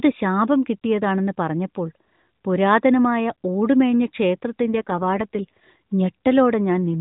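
From 4.65 to 5.64 s there's an AMR rate drop: the speech roughens and goes buzzy and synthetic, which fits the codec stepping down from around 12.2 to 5.9 kbps to buy error protection. The bandwidth holds, there's no gap, and it smooths out again afterwards.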